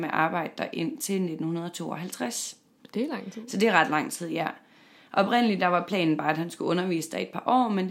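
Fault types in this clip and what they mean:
No technical faults are audible in this speech recording.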